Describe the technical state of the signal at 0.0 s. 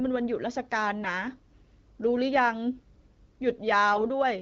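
At 0.0 s the speech is intact, carried through an AMR wideband (HD Voice) path with no fault at that point.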